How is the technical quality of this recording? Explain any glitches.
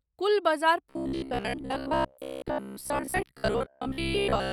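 The recording has one glitch. Robotic sound from repeated short buffers runs from 0.91 s, right after "कुल बजार", to 4.52 s. It likely comes from new audio arriving too seldom, so playback keeps looping roughly 15 ms fragments for most of that stretch while the real audio is skipped. The loop imposes a fixed 66.7 Hz buzz, making the speech a rigid, metallic drone that only loosely tracks the original.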